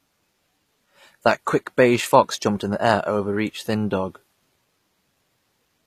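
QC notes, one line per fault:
Throughout, HE-AAC compression: s sounds come out gritty and metallic, with treble that stays bright but feels synthetic, likely from spectral band replication at a low bitrate near 24 kbps. A spectrogram shows blocky, copied-looking upper bands and nothing above about 14.9 kHz.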